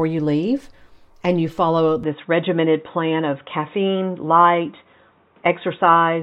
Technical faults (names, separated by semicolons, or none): input switched to a poorer device